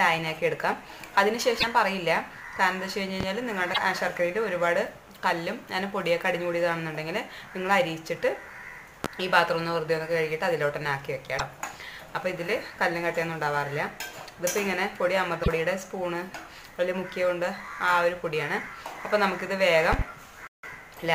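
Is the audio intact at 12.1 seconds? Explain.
Yes, at 12.1 seconds the audio is intact, with no dropout, click, distortion or other fault at that moment.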